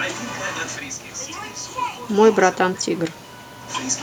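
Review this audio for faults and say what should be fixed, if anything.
No faults found here, so nothing needs fixing.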